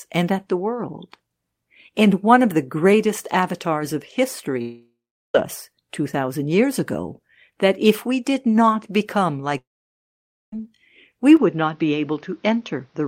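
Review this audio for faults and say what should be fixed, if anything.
Two long network dropouts break the speech. The first runs from 4.61 to 5.35 s, right after "the greatest avatars of". About 0.73 s of audio never arrives. The receiver stretches the last sound into a fading buzz, and it falls to silence for roughly 0.39 s. The second runs from 9.58 to 10.53 s, after "we did not become". There about 0.94 s is lost and almost all of it, roughly 0.89 s, is silent. The cause is likely lost packets. On a spectrogram each gap shows a smeared, fading band and then a blank column, and the waveform flattens before the speech resumes mid-stream.

From 11.37 s to the end the input appears to switch to a poorer device. The change is instant, with no gap and no real jump in level. Above that point nothing passes over 6.5 kHz, so the sound turns dull and boxy. A new noise floor also appears, roughly 40 dB below the speech. 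The likely cause is a fallback to another microphone or a headset call profile. A spectrogram shows the upper band cut off sharply at that moment, and the gaps between words carry a faint steady haze.

To fix both, give the network path more jitter buffering with redundancy or retransmission, and lock the recording input so it can't change device mid-session.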